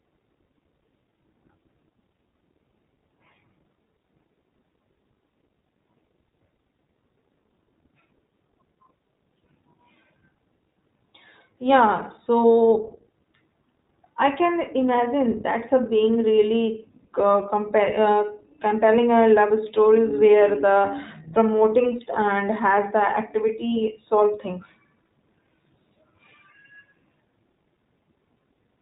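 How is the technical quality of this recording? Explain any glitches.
The quality's limited: the whole recording has gone through the iLBC codec. It's band-limited to nothing above 3.8 kHz, and each frame coded independently (20 ms framing, fitting 15.2 kbps) leaves the speech plainly rough and slightly synthetic.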